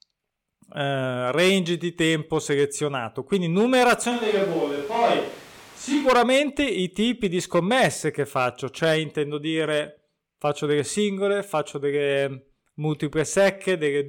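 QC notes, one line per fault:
4.13–6.05 s: switch to a distant microphone. The speech abruptly turns roomy and hollow, with thinner bass, a level drop of about 5 dB and room noise only some 25 dB down, likely because the close mic dropped out. It snaps back just before "i tipi di scommesse".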